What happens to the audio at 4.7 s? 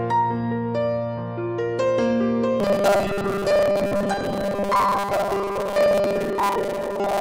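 At 4.7 s the sound has a robotic quality from repeated short buffers. The fault runs from 2.60 s to the end of the clip at 7.20 s. It sounds like a rigid, metallic buzz pitched at 200 Hz that still roughly follows the underlying sound. The likely cause is new audio arriving too seldom, with the last 5 ms looped to fill each gap. Most of the real signal is skipped, and that 5 ms loop length sets the 200 Hz buzz.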